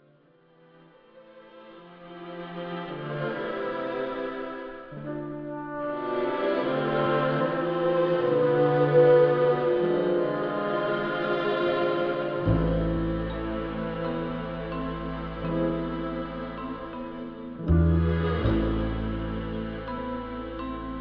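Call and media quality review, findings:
No call or media quality faults found in this recording.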